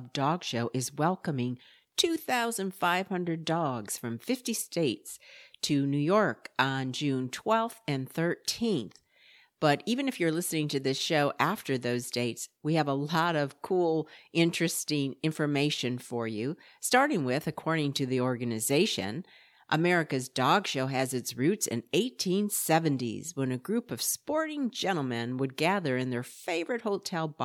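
No technical faults are audible.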